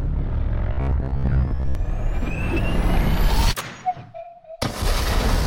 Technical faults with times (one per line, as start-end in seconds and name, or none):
0.73-1.75 robotic sound from repeated short buffers